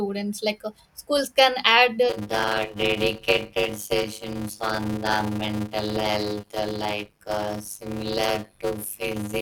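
Speech clip with a block size mismatch (padded) starting at 2.09 s, right after "schools can add the", and running to the end, still present at "education classes like topics". A steady 100 Hz buzz sits over the audio, and delivery slows to about 0.53 times normal speed while the timbre stays. One stage writes shorter blocks than the next stage reads, which fits 256-sample writes, and zeros fill the remainder, leaving a gap in every block.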